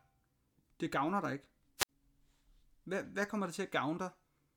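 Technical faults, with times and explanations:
1.78 to 1.89 s, wireless microphone squelch dropout: the speech gives way to a brief surge of hiss or static, then falls into a hole of near silence lasting about 58 ms before the speech returns. The radio link from an analogue FM microphone weakened far enough that the receiver's squelch treated the signal as lost and muted its output. The rising hiss is receiver noise coming up as the carrier fades, just before the mute engages.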